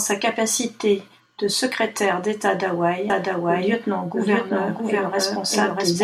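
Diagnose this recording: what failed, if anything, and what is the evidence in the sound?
From 3.10 s to the end, the speech doubles: a full-band copy at equal level trails by about 0.7 s, cutting in abruptly with no decay or room colour. This doubled audio track likely comes from a second, slower capture path at the driver stage.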